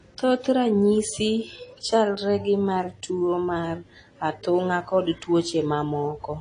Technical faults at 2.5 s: AAC compression

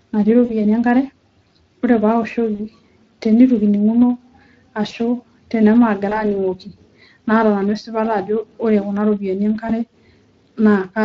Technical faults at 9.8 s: Speex codec; VoIP packet loss concealed by the speech codec

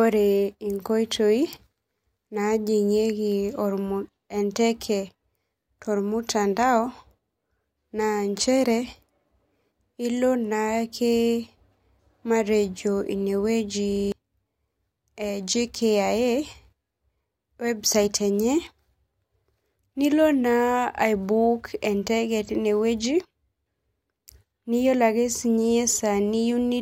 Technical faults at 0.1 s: none

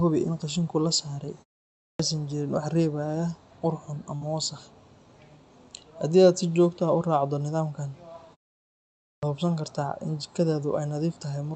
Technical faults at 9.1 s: clipped start after a pause

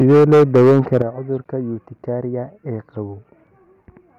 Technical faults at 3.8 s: none

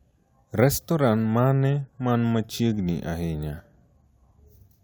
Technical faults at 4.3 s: none

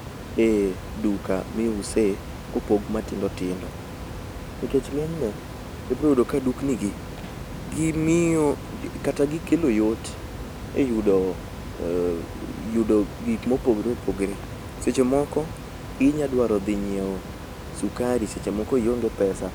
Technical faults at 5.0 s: none

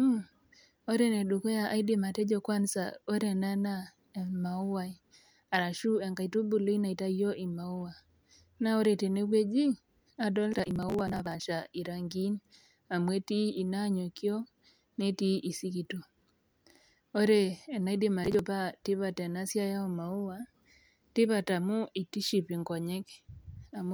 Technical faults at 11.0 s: processor overload crackle

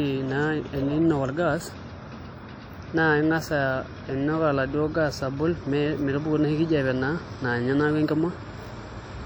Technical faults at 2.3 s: WMA compression

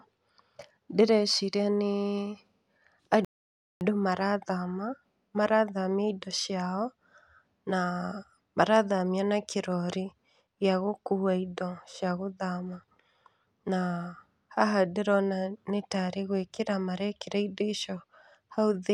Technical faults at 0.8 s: none

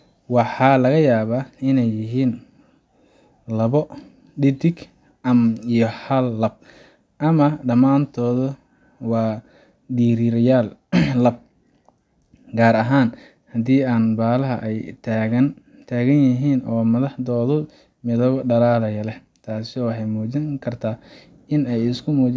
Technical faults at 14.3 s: none

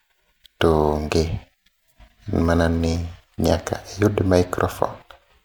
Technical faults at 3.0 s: generation loss

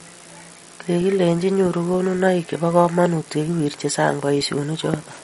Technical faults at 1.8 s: MP3 compression

